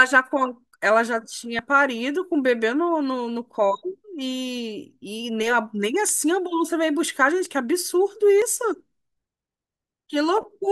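At 1.59 s the speech jumps abruptly. A sliver of sound, roughly 20 ms, is missing, and the two sides meet with no gap of silence. This is likely a dropped buffer (overrun): the capture side fell behind and the hardware overwrote samples before they were read. A shorter skip, about 10 ms, follows at 7.45 s. At 8.42 s a longer jump, around 40 ms, cuts audibly into the sound.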